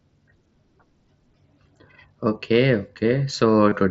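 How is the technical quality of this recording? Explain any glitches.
There is one glitch, near the end of the speech, heard through the wideband mSBC headset codec's light grain and 8 kHz ceiling. From 3.69 to 3.72 s there is concealed Bluetooth headset packet loss. About 22 ms of audio went missing, which fits three lost packets. The receiver filled the gap by repeating the closest-matching recent waveform. It sounds like a brief buzzy hold at full level, then a slight warble as the real speech resumes.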